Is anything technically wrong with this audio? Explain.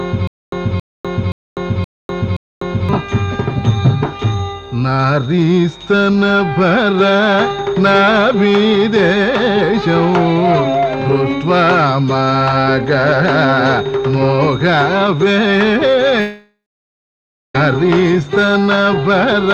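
Yes, there are two faults.

From the very start to 2.89 s there's a stutter with silent gaps. A 0.27 s fragment repeats five times, with about 0.25 s of dead silence between repeats, so a burst comes around every 0.52 s. That's likely a stalled stream replaying its last chunk on each retry, and the audio from that stretch is lost.

From 16.20 to 17.55 s there's a long network dropout, likely from packets not arriving. About 1.34 s of audio is missing. The last sound carries on as a fading buzz for roughly a third of a second, then it's silent for about 0.98 s before the audio resumes past the gap.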